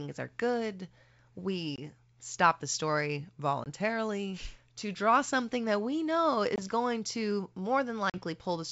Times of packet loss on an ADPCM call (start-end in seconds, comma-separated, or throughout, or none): 1.76-1.79, 3.64-3.68, 6.56-6.60, 8.10-8.21